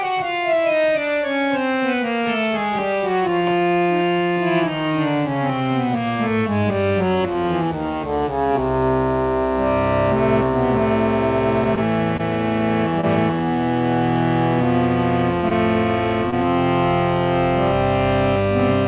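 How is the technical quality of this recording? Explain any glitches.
The recording has two bursts of scattered short gaps, heard over telephone-band audio that stops at 4 kHz, as a narrowband call codec such as G.711 would produce. From 11.64 to 13.05 s, and again from 14.62 to 16.34 s, scattered short gaps appear: about four packets in each stretch were lost or arrived late, the longest hole around 20 ms. The receiver bridged them by extending the preceding sound, leaving brief ticks, smears and hiccups.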